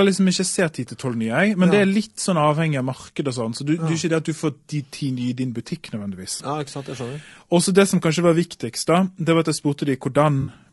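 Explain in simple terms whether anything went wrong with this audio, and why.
Throughout the speech there is a rough, grainy texture, with a hiss filling the gaps between the voice's tones and a thin, artificial-sounding top end. This is likely low-delay AAC compression, the kind used on video calls, where a low bitrate leaves too few bits to describe the voice cleanly.

There are also two moments of AAC frame loss with concealment. At 6.37 to 6.41 s, about 20 ms of audio went missing and the decoder patched it by reusing the last good sound, leaving a brief smeared, noisy blip. At 10.41 to 10.51 s, a longer 60 ms gap produces a phasey, blurred patch.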